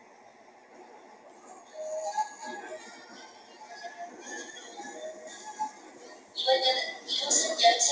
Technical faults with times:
0.00-7.91 noise suppressor applied to music or sounds
0.00-1.47 sound cut by the noise suppressor
3.28-3.64 sound cut by the noise suppressor
5.73-5.91 sound cut by the noise suppressor
6.16-6.35 sound cut by the noise suppressor

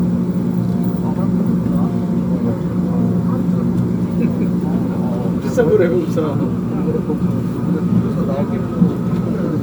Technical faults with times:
0.00-9.62 generation loss

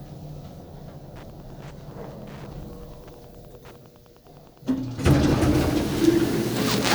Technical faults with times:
1.14-5.70 Wi-Fi interference

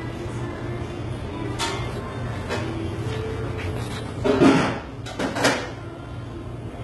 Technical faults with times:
0.00-6.83 HE-AAC compression

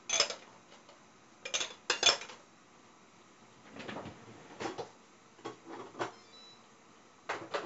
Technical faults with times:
0.00-7.65 4-bit ADPCM compression

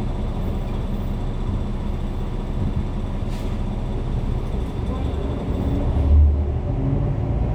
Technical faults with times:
none

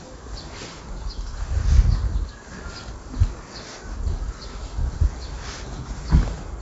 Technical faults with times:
0.00-6.62 4-bit ADPCM compression

